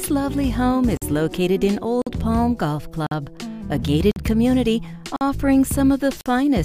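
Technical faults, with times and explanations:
0.97, 2.02, 3.07, 4.11, 5.16 and 6.21 s, gap between chunks: abrupt 48 ms silent holes with hard edges, where silence was inserted after every 1 s chunk of audio.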